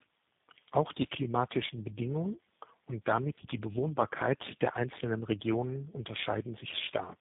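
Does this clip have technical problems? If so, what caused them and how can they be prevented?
Yes. Tandem speech coding runs through the whole clip: the speech sounds rough, muffled and warbly from start to finish, with nothing above 3.8 kHz. That fits a call that passed through several speech codecs in a row, about four of them and likely ending in G.729A, with decoding to plain telephone-rate audio at each border and re-encoding on the next link. Each coder models the previous coder's errors as if they were speech, so the distortions stack. Prevention: keep the call in one codec end to end, using transcoder-free operation or codec negotiation so that it is encoded only once.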